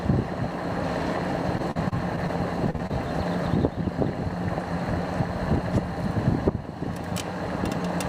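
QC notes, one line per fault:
1.57–2.30 s, repeated packet loss (robotic sound): six gaps in quick succession, longest about 41 ms, with 110 ms patched by extending the last sound and 40 ms lost outright. It comes across as choppy, with pieces missing. On a spectrogram, repeated smeared, flattened harmonic stretches break the texture; the waveform shows abrupt joins.
2.70 s, short stall from a late packet: the jitter buffer ran dry and the last sound was held for 36 ms until the packet arrived, then playback resumed with nothing lost. A brief over-long hold, slight buzz or dip. Spectrogram shows a frozen, horizontally stretched slice; waveform a repeated-looking cycle.
2.76 s and 2.87 s, short concealed packet loss: two holes, each about 20 ms of audio missing, filled with 28 ms and 25 ms of continued sound before blending back. Heard as quick smears or wobbles. Spectrogram shows brief blurred patches with softened onsets; waveform shows slight discontinuities at the blend points.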